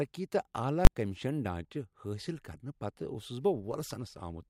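Invalid numbers at full scale strike this speech clip between 0.85 and 0.87 s, heard as a single loud bang. For that 20 ms block a calculation produced infinite or invalid values, and the output was forced to the largest positive or negative sample value. The signal was pinned flat at one extreme value, far beyond the speech's peaks, with nothing of the speech left in between. Because the block is so brief, its onset and release merge into one sharp, very loud pop rather than two separate clicks.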